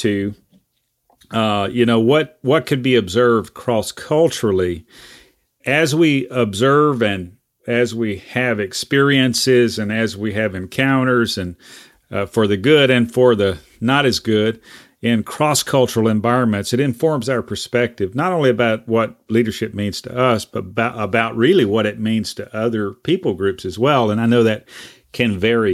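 No technical faults can be heard anywhere in the recording.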